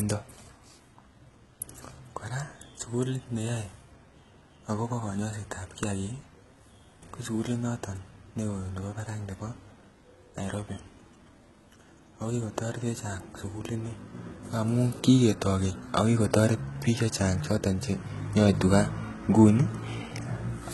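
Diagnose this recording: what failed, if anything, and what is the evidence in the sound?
The failure is at the codec stage, and it runs through the whole speech clip. The treble sounds bright but synthetic, and sibilants come out gritty and lispy. The damage is heavy, which fits a very low bitrate near 16 kbps. The likely cause is HE-AAC compression. The codec codes only the lower spectrum and rebuilds the top by spectral band replication, copying lower bands upward under a coarse envelope. The rebuilt harmonics do not line up with the real ones across the crossover.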